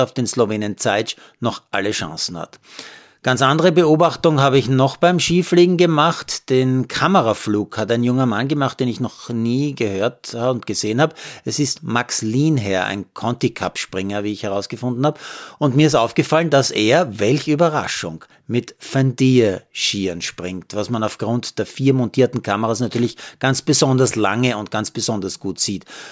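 A speech recording, and nothing is technically wrong with it.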